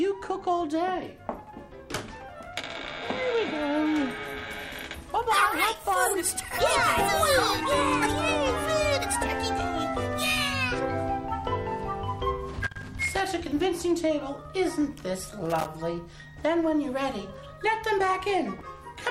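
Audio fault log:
12.64–13.20 s and 15.29–15.66 s, loose connector crackle: a worn contact making and breaking chops the signal, showing as ragged dropouts and broadband vertical streaks in the spectrogram.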